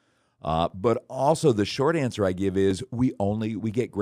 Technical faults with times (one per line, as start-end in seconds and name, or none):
0.70-3.72 clock drift buffer slips